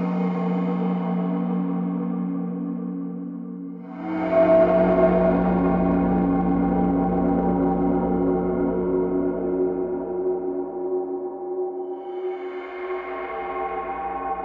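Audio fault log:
No audible faults found.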